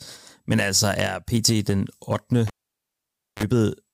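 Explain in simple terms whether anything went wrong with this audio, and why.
A cable pulled and plugged in back at 2.47 s: a pop, 0.91 s of near silence, a 38 ms burst of 50 Hz mains buzz, then a pop at 3.43 s.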